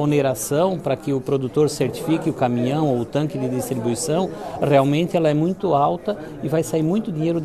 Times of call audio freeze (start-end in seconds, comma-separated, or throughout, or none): none